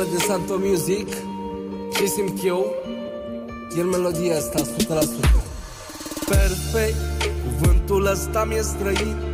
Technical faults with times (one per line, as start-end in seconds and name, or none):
none